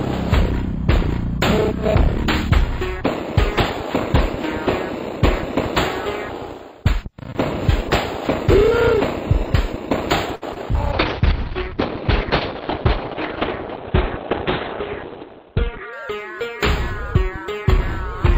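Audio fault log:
10.35–10.44 s, short stall from a late packet: a packet arrived late and the jitter buffer ran dry, so the receiver held the last sound for about 62 ms until it came, then resumed from the same point. Nothing is lost, but the sound hangs briefly with a faint buzz.
10.54–10.57 s, short concealed packet loss: about 20 ms of audio never reached the decoder in time. The receiver bridged the gap by extending the preceding sound and blending back into the real signal, leaving a brief smear or wobble where that fragment should be.
10.93–15.99 s, call bitrate drop: the connection's bandwidth estimate collapsed and the encoder was forced to code far more coarsely, which fits a fall from 64 kbps to 7 kbps. Everything above 4 kHz is cut off, leaving the sound muffled and rough for about five seconds.
16.10–16.80 s, jitter buffer speed-up: excess audio had built up in the buffer, so the receiver trimmed many short pitch-period slices to reduce delay, removing a few hundredths of a second in total. 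The sound plays about 4% faster at unchanged pitch.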